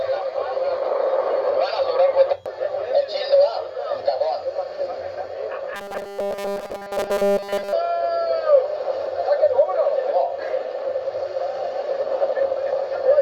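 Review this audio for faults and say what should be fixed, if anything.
From 5.75 to 7.73 s, a rigid 200 Hz buzz: robotic sound from repeated short buffers, likely a 5 ms block looped when fresh audio arrived late. Preventing it means giving the playback path enough buffering and timely delivery so it never has to replay old audio to fill gaps.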